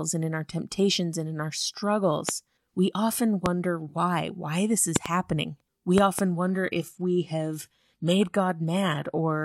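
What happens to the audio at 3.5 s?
A single loud pop lands in the speech from 3.46 to 3.48 s, right after "we often" and just before "why why this". It peaks about 20 dB above the speech level. The likely cause is a sudden voltage step or pulse, such as a plug, switch, static discharge or driver glitch, entering the signal chain. The circuits downstream shape it into a brief, sharp thump. The speech continues underneath without a break.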